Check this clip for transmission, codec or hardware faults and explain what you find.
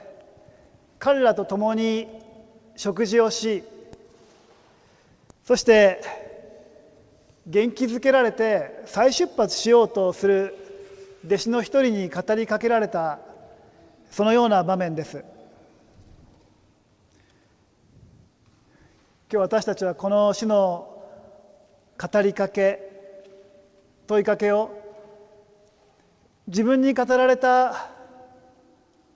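No faults found; the audio carries the expected band limit of a wideband call path, with nothing above 8 kHz, which fits G.722 at 64 kbps.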